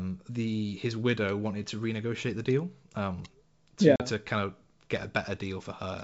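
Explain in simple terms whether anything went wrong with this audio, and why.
Something did go wrong, once. At about 3.96 s, just after "the deal um to", the speech drops into a sudden silent gap about 40 ms long, ending at about 4.01 s before "to kind of". This is packet loss on an ADPCM call. A couple of packets never arrived and were filled with silence. This ADPCM-based G.722 wideband coding predicts each sound from the last. After the gap, the receiving end has lost track, so the speech comes back briefly wrong before it recovers.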